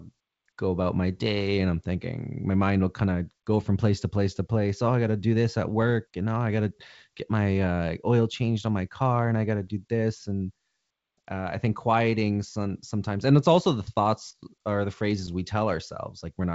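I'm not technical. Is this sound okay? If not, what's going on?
No. At about 5.82 to 5.94 s, between "to do this at" and "and now oh I", there's a short burst of pops and roughness where the loudness jumps. These are bit errors on an ADPCM link: a few digital bits got flipped, throwing the decoder off briefly.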